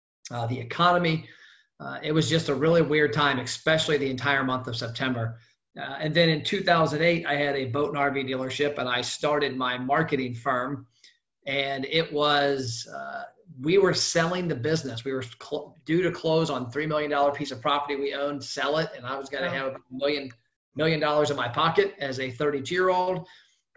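Nothing goes wrong anywhere in this one, so there's nothing to flag as it plays.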